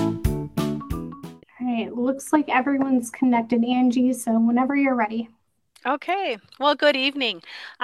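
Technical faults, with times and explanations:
No technical faults can be heard anywhere in the audio, and the signal holds steady and continuous across the whole recording.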